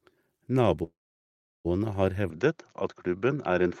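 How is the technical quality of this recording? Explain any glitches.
The recording has two clear glitches, one a hold in the sound and one a change in tone near the end.

From 0.83 to 1.67 s the speech stops and a brief fading hiss gives way to about 0.72 s of silence. Then it resumes exactly where it left off. This is a call audio freeze, likely caused by packets stalling in transit so the jitter buffer emptied. The receiver stretched the last sound, then went quiet. About 0.81 s of delay was inserted, but nothing was lost.

From 2.30 s to the end the voice abruptly turns duller and boxy, with nothing above 7.3 kHz and a faint new background noise well beneath the speech. There is no silence at the change and the loudness stays about the same. This points to the input switched to a poorer device, likely another microphone or a headset call profile with a narrower band and its own noise.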